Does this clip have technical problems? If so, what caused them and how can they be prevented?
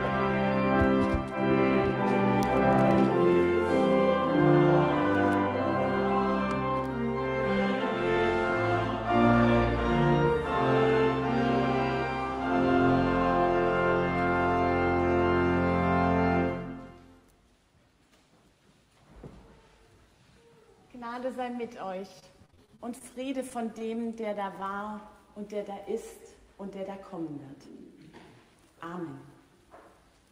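Yes. From 22.19 to 23.06 s there's repeated packet loss that gives a robotic sound: a run of short holes, the longest about 29 ms, each papered over by extending the previous sound, so roughly a fifth of that stretch is concealment and some audio is genuinely gone. A bigger jitter buffer or forward error correction on the link would ride this out.

Right after, there are two short stalls from a late packet, at 23.79 to 23.93 s and 24.21 to 24.25 s. Each time the jitter buffer ran dry, so the last sound got held for about 18 ms until the packet showed up, and then playback picked up where it left off. Nothing's lost, just a brief smeared hold. A slightly deeper or adaptive jitter buffer would absorb that delay swing.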